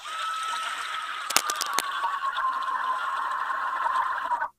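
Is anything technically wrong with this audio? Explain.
Yes. From 1.30 to 1.85 s, a rough scratching, rustling burst sits about as loud as the sound itself: cable scratch noise, likely a worn cable or connector shifting and changing its contact resistance.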